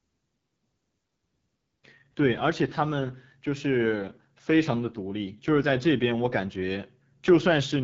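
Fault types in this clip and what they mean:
AMR wideband (HD Voice) codec, throughout: the speech has been squeezed through a low-rate speech coder that rebuilds the voice from a vocal tract model excited by pulses, modelling detail only up to 6.4 kHz and padding the band above with shaped noise. The coding damage is plainly audible as a rough, raspy grain on the voice, which fits one of the lowest AMR-WB rates, around 8.85 kbit/s, and nothing sounds above about 7.4 kHz.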